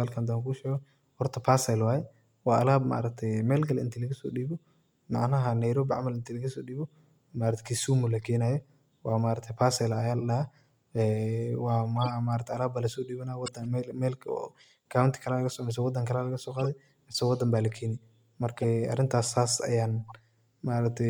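From 11.96 to 12.07 s, then 13.46 to 13.64, 16.59 to 16.66, 18.57 to 18.64 and 20.08 to 20.12 s, you get brief chirpy noise bursts. Each is a corrupt frame decoded: damaged bits got played anyway, throwing energy at the wrong frequencies. The middle three peak around -20 dBFS, the first near -25 dBFS, and the last one is much quieter.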